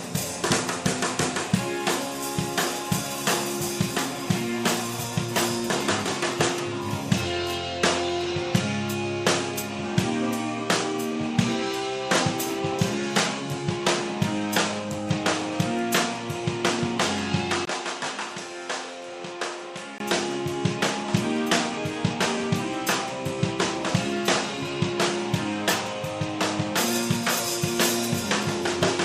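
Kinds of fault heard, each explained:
Input switched to a poorer device: From 17.65 to 20.0 s the sound turns duller and about 10 dB quieter, loses everything above 11.4 kHz, and gains a new background noise roughly 45 dB under the signal, after a 20 ms silence at the switch. The likely cause is the recording input jumping to a lesser microphone or headset profile. A spectrogram shows the upper band going dark across that span; the waveform shows a brief flat gap, then a shrunken envelope.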